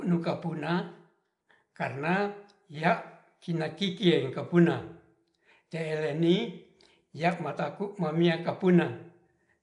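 From start to finish the speech carries a rough, hissy halo and a smeared, underwater quality, with codec damage that is plainly audible. This is likely Nellymoser compression, the old Flash microphone codec, at a rate that points to about 44 kbps. Its fixed, sparse bit allocation leaves weaker bands empty and fills them with noise. On a spectrogram, energy stops abruptly at 10.6 kHz, and below that the bands look patchy and speckled with noise.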